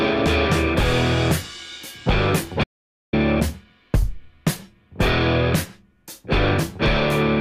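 At 2.64 s the sound cuts off abruptly and stays silent until 3.13 s, an audio dropout to silence lasting about 0.49 s. The input was likely lost while recording continued, so silence was written. The waveform shows a flat line, the spectrogram a blank column with no room tone.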